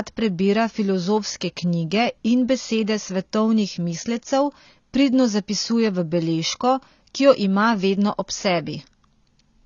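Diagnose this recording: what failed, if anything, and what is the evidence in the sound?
The codec stage failed: the speech was likely passed through AAC compression at a starved bitrate, which fits AAC-LC at around 24 kbps. Throughout the clip nothing remains above 7 kHz, and sibilants smear into a dull, fizzy warble where bands lost their bits.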